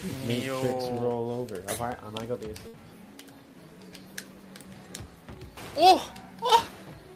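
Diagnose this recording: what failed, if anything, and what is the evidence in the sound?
At 2.67 s the sound briefly smears into a held, fading continuation of the last sound, then resumes at 2.75 s with a piece missing. This is a burst of packet loss at the network stage: the receiver extended and faded the last audio for about 60 ms, then skipped about 60 ms ahead.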